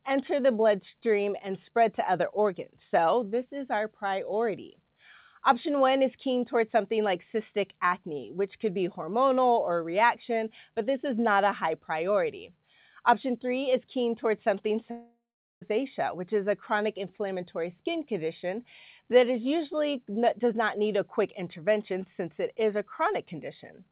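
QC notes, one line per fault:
14.91 to 15.62 s, long network dropout. The last sound is stretched into a fading buzz, then goes silent for about 0.42 s. Sound returns with roughly 0.7 s missing. The likely cause is a network gap the receiver filled with concealment.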